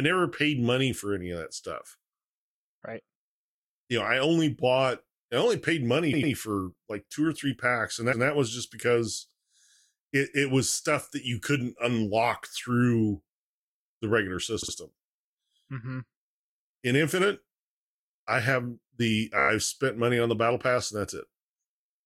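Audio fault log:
6.12–6.32, 8.12–8.26, 14.61–14.73 and 19.39–19.49 s, repeated frames: short stutters where a chunk of compressed audio gets played again. After "I only paid money" an 88.5 ms block plays twice more. After "or three packs and" a 139.3 ms block repeats once. At 14.6 a 47.9 ms block plays twice more. Before "spent money on the" a tiny 14.5 ms block loops seven extra times. Each stutter adds about 0.1 to 0.2 s to the clip.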